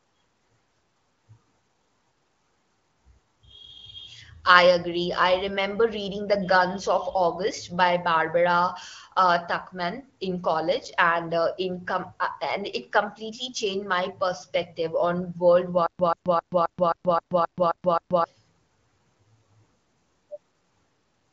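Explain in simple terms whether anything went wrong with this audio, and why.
From 15.87 to 18.24 s there is a stutter with silent gaps: a 136 ms burst repeats nine times with silence between, unlike a seamless loop, likely from a stalled stream.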